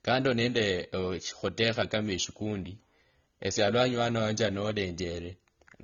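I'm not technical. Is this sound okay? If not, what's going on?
No. AAC compression is audible from start to end of the speech. The sound is muffled, with nothing above 6.9 kHz, and has a swirly, fizzy edge, likely because it was squeezed into a small file that discards detail the encoder judged least noticeable.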